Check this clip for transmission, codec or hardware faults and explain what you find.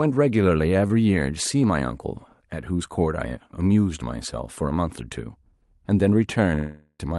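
Two transmission faults are audible in this call recording, whose band tops out around 12 kHz, consistent with an Opus call codec at roughly 40 kbps.

Short concealed packet loss at 0.87 to 0.91 s: about 20 ms of audio arrived too late for the decoder, so the receiver extended the preceding sound to bridge the gap and then crossfaded back into real audio. It comes across as a brief smear or wobble in the speech.

Long network dropout from 6.55 to 7.01 s, likely caused by the network delivering no audio for that stretch. The receiver extended the last sound for about 0.44 s as a fading buzz or hiss, with a moment of near-silence before the speech resumes, missing the lost portion.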